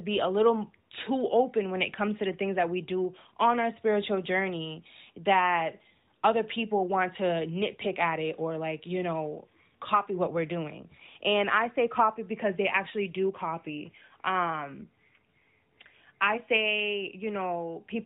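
There are no technical faults to describe in this speech clip.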